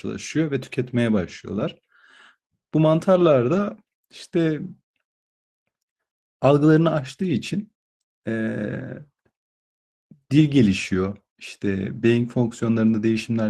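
Brief rough, noisy patches interrupt the speech at 1.51 to 1.61 s, 3.55 to 3.57 s and 10.47 to 10.49 s, with no gap or dropout. Each is a lost packet rebuilt from error correction. The first rebuilds about 60 ms, consistent with three separate lost packets; the other two are single 20 ms frames. The decoder filled each hole with a low-bitrate backup copy carried in the following packet, so the audio stays continuous but coarser there.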